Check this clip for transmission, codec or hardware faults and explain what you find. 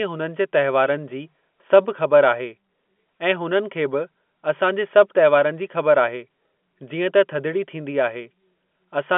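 No faults can be heard: the speech carries the narrow band of G.711 telephone coding, from 200 Hz up to 3.5 kHz, and its level-following quantisation noise stays faint beneath the signal.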